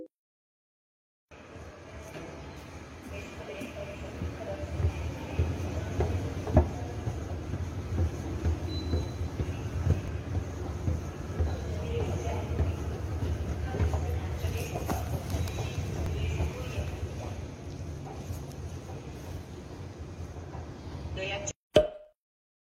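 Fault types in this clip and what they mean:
Overlap between stream segments: two neighbouring chunks of the stream claimed the same stretch of time, so the player trimmed the overlap even though that audio wasn't actually duplicated, and roughly 40 ms simply disappears each time. The waveform jumps across the gap, giving a small click or skip at 4.09, 10.08, 16.06 and 22.05 s. That steady 6-second spacing points to 6-second segments, each boundary losing a sliver.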